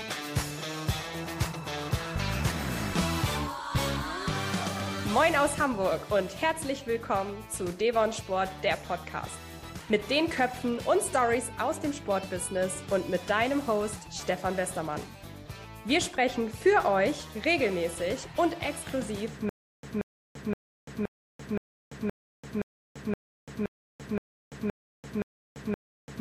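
At 19.49 s a stutter with silent gaps begins and runs to the end. A short burst of about 181 ms repeats, followed by 340 ms of digital silence. This cycle returns every 521 ms, thirteen times. The playback likely stalled, replaying its last fragment, so the audio that should follow is lost.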